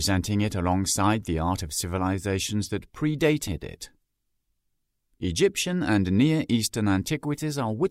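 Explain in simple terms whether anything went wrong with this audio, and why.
Two things went wrong. At 3.47 to 3.49 s there is a skip ahead: about a second of sound was dropped on the way or by the jitter buffer, so playback jumps forward with no gap.

From 5.67 to 6.19 s a jitter buffer speed-up plays the audio about 11% fast at the same pitch. The receiver trimmed roughly 70 ms in many tiny pieces to cut accumulated delay.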